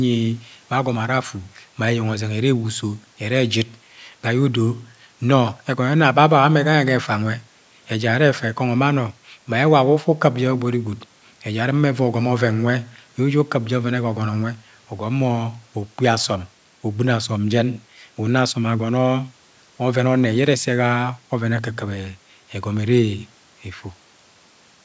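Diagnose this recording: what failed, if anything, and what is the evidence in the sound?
Nothing has failed here: the speech carries normal call microphone processing, with nothing above 8 kHz, and the faint room noise sits about 38 dB below the voice, both just what you'd expect from an ordinary call recording.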